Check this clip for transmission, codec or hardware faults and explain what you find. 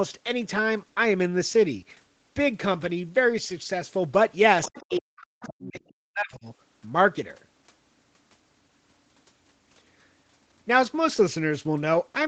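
Two echo-canceller faults show up in the middle of the speech, clustered between 4.63 and 6.46 s, within a band that stops at 8 kHz as an Opus call link at around 20 kbps would leave it.

Other side's voice leaking through, at 4.63 to 4.98 s, 5.42 to 5.47 s and 5.76 to 5.94 s. The far end's audio, played on a loudspeaker near the microphone, was not fully cancelled, most likely by an echo canceller that had not converged. It is heard as faint foreign scraps, roughly 15 to 25 dB below the talker and fading with each occurrence.

Speech suppressed in double talk, at 4.68 to 5.75 s and 6.06 to 6.46 s. With both sides active at once, the canceller, likely unable to tell the local talker from the loudspeaker echo, pulled the whole signal down. The talker's voice drops by as much as about 40 dB, leaving holes totalling around a second in the first stretch and under half a second in the second, interleaved with the leaked fragments.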